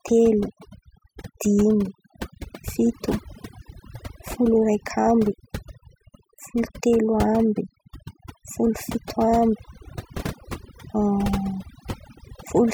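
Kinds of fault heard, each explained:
Overdone noise removal: aggressive noise reduction zeroes bands near its noise estimate throughout, leaving a lowered background that breaks up into twinkling, warbling specks; spectrogram pauses turn dark with scattered bright specks.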